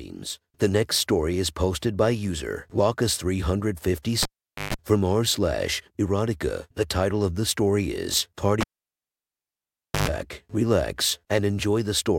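Speech with the cable pulled and plugged in twice: at 4.23–4.74 s before "from r slash erotica", and 8.61–10.08 s after "of the story is". Each time there are pops, near silence of 0.46 s and 1.42 s, and a 50 Hz mains buzz lasting about 0.14 s and 0.11 s as the plug re-seats.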